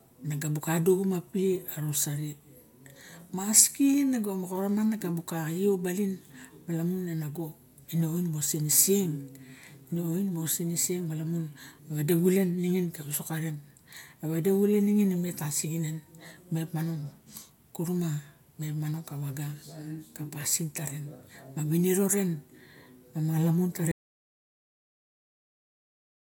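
A speech recording that ends in an audio dropout to silence. At 23.92 s the sound cuts off mid-flow and never returns, leaving roughly the last 2.5 s as silence with no room tone. That abrupt drop to silence, rather than a fade or a natural pause, points to the input being lost, likely a disconnected device, broken link or accidental mute, while the recorder kept writing. Whatever followed is gone.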